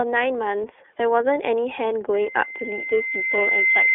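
The speech runs through the iLBC codec from start to finish. Each 30 ms frame is coded on its own, which fits the 13.33 kbps mode. The band is cut to about 300 Hz to 3.5 kHz, so a spectrogram shows an empty region above 3.5 kHz. The voice sounds plainly rough and synthetic.

From 2.14 s to the end, a loudspeaker feedback squeal takes over. The microphone re-amplifies its own loudspeaker output at 2.1 kHz, and that tone swells over roughly a second and a half to about 5 dB above the speech. On a spectrogram it appears as a single bright horizontal line that grows steadily brighter, and on the waveform as a rising, even envelope.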